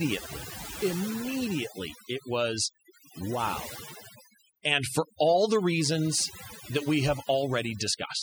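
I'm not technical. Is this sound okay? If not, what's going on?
No. Throughout the speech you can hear overdone noise removal: a noise-cleaning tool was set too aggressively, so it shuts off quiet parts of the sound along with the noise. Pauses become near-silent with twinkling specks.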